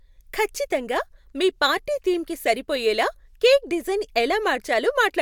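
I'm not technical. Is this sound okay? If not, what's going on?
Yes, this sound is okay, and nothing is going on with it.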